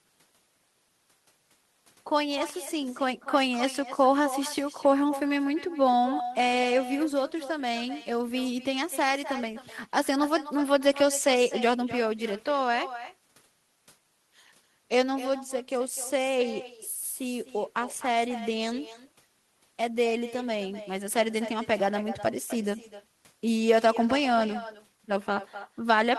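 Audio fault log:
Throughout: echo with no canceller. Every phrase gets shadowed by a fainter, thinner copy arriving roughly a third of a second later, sitting about 13 dB below the direct speech. That's what you hear when the far end runs the call through a loudspeaker, their mic picks it back up, and nothing strips it out, so your own speech returns after the network round trip and smears each word.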